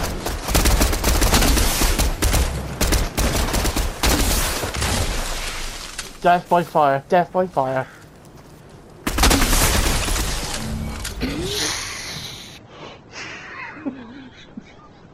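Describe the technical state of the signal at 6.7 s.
At 6.7 s the signal is intact, with no audible fault at that moment.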